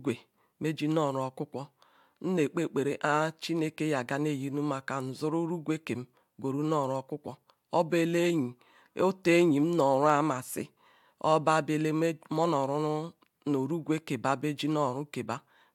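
Nothing here points to a technical fault; the speech just carries on as recorded, with nothing breaking in at any point.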